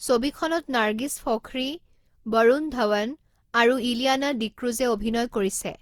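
Generation loss runs throughout the speech, from start to finish. The audio sounds swirly, smeared and hollow, with blurred consonant attacks, which is worse than a single encode at this quality would give and fits an Opus chain around 64 kbit/s. The likely cause is repeated decoding and re-encoding, roughly seven passes. Each pass quantises again on a shifted frame grid, so noise builds up. Nothing is present above 20.2 kHz.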